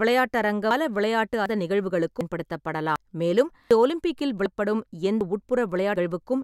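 The recording chain most likely works in one-second chunks and drops around a third of a second each time it hands over from one chunk to the next, splicing the two sides together with no gap. This is audio missing between chunks, heard as abrupt skips in the speech at 0.71, 1.46, 2.21, 2.96, 3.71, 4.46, 5.21 and 5.96 s. The jumps come at a steady 0.75 s rhythm.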